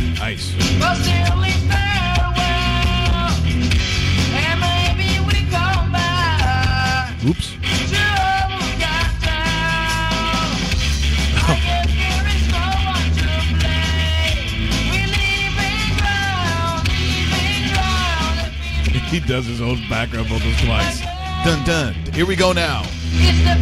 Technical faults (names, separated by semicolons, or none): none